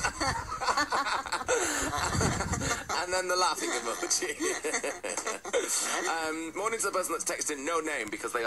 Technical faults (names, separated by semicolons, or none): none